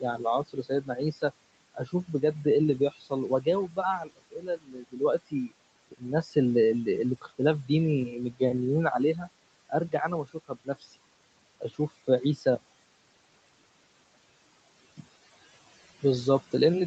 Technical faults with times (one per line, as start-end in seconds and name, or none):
0.00-16.87 noise suppressor artifacts
0.01-8.41 speech cut by the noise suppressor
9.14-10.99 speech cut by the noise suppressor
11.61-12.45 speech cut by the noise suppressor